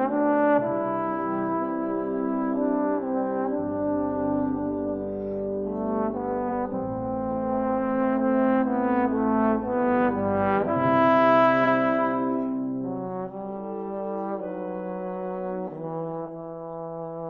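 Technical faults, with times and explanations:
6.48 to 6.53 s and 11.64 to 11.68 s, repeated frames: a 46.4 ms block plays twice, which fits a single compressed frame, adding 46.4 ms each time. Unlike a dropout, nothing is lost. A brief stutter is heard as the audio jumps back.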